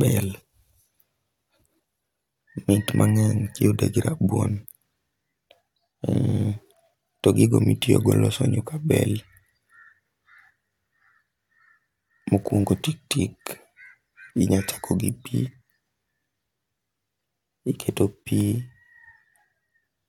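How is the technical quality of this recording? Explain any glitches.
No technical glitches can be heard in this speech recording: the signal stays continuous and stable throughout, with no audible dropouts, distortion or interruptions.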